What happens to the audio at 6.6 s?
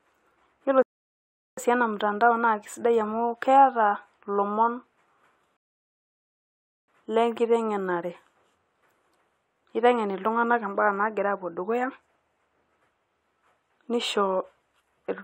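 At 6.6 s the speech is halted by a rebuffering stall running from 5.57 to 6.88 s. The player exhausted its downloaded audio and paused until more data arrived, inserting about 1.3 s of silence. The speech then picks up exactly where it broke off, with nothing skipped. On a waveform this appears as a flat line across that span; a spectrogram shows a clean, empty vertical gap with matching energy on either side.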